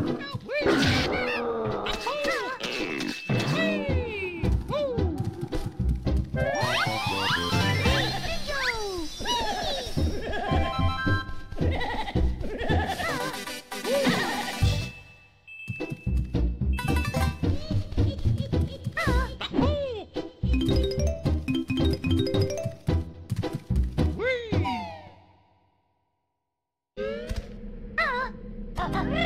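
Nothing in the audio stands out as a technical fault at any point, so there's no dropout, glitch or other problem to point to along the way.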